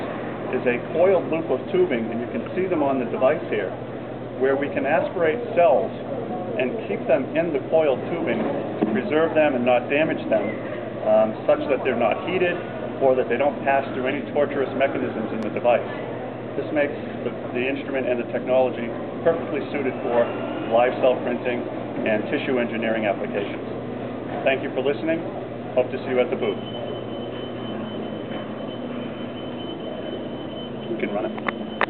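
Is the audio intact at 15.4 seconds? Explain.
No. A loud pop sits from 15.43 to 15.45 s, lasting about 22 ms. It is a single sharp pop that stands roughly 5 dB above the surrounding level. The likely cause is a sudden voltage step or pulse entering the signal chain, such as a plug, a switch or static. The circuits downstream shape that pulse into a brief click-like burst. The sound continues underneath the pop without interruption.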